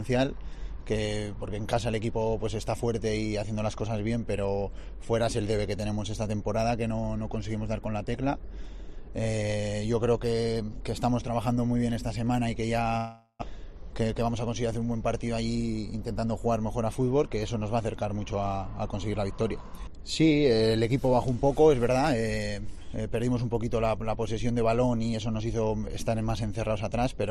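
From 12.97 to 13.44 s the sound smears into a fading buzz, then about 70 ms of near-silence, likely a long network dropout; the spectrogram shows blurred, decaying bands, then a blank gap. From 14.01 to 14.31 s a jitter buffer speed-up trims about 40 ms, running 111% fast at unchanged pitch; the waveform shows pitch cycles spliced closer together.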